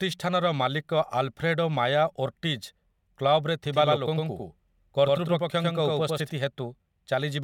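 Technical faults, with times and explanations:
3.66–6.30 s, doubled audio track: a second full-band copy, about as loud as the original, trails by around 100 ms and cuts in and out abruptly without decay, likely from a slower second capture path; waveform and spectrogram show each onset repeated at that fixed offset.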